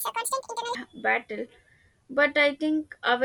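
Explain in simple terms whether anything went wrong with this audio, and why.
Something did go wrong right at the start. For the first 0.75 seconds, the speech runs at double speed and sits a full octave higher, so it comes out squeaky and rushed. That's a wrong sample rate problem: the audio is played back faster than it was recorded, with nothing converting between the two. Doubling both speed and pitch fits audio captured at 24 kHz being played at 48 kHz.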